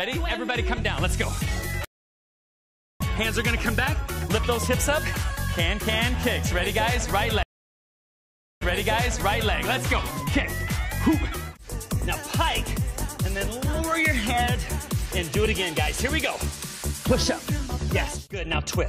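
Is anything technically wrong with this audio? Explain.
Yes, there are two stream reconnects. At 1.85 to 3.01 s the connection dropped, leaving about 1.15 s of silence. The player then reconnected and started a new decoder mid-stream, so the audio picks up roughly a second and a half further on and that stretch is lost. At 7.43 to 9.54 s a second break gives 1.18 s of silence. Here the server resent buffered data, so the audio resumes 0.93 s earlier and that portion is heard twice.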